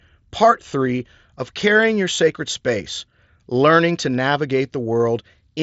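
No faults are audible in this speech; it carries the band-limit of an mSBC Bluetooth headset link, with nothing above about 7.7 kHz and a light codec texture on the louder syllables.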